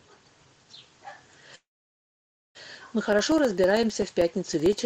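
From 1.55 to 2.57 s a call audio freeze, likely from delayed packets draining the jitter buffer, inserts about one second: a brief fading buzz or hiss, then 0.92 s of silence showing as an empty spectrogram column. Nothing is lost. From 3.13 to 4.79 s, periodic USB or driver dropouts cut roughly 1 ms of silence every 64 ms, about thirty evenly spaced ticks visible as thin vertical gaps in the waveform.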